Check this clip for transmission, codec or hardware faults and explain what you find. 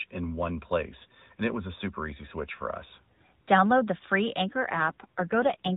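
One fault is present: an AMR rate drop, heard through the AMR narrowband mobile codec, which passes nothing above 4 kHz.

From 4.49 s to 5.73 s, right after "the free", the speech turns rougher and more synthetic. That fits the codec stepping down from 12.2 kbps to 5.9 kbps, spending bits on error protection. The waveform has no gap. On a spectrogram the 4 kHz ceiling holds while the harmonics blur and coarsen.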